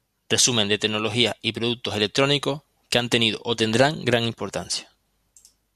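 No technical faults can be heard anywhere in this speech recording. The sound runs on without any break or disturbance that calls for comment.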